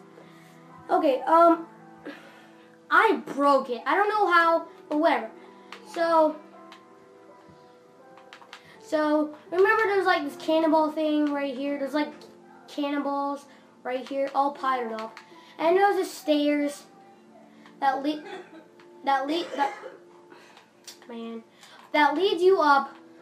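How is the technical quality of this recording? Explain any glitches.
The recording has one fault, sample clock jitter, present for the whole clip. The converter's clock wavers by around a microsecond or two, so samples land slightly early or late. The error follows the waveform's slope, adding a hiss or roughness roughly 40 dB below the signal that swells on loud, bright passages and disappears in silence.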